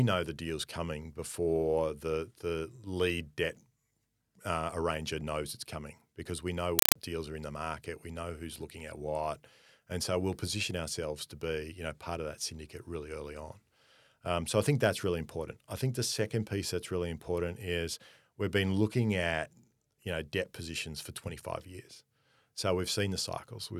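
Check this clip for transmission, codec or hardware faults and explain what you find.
There's one clear fault, a compressed stream played as audio, from 6.79 to 6.96 s, between "coming because we know" and "deals are in the". The speech drops out for loud, chattering static: 4 ms noise bursts repeating at 31.25 Hz with silent gaps between them. That pattern fits a Dolby Digital (AC-3) bitstream, perhaps around 192 kbps, that the receiver took for plain samples instead of decoding.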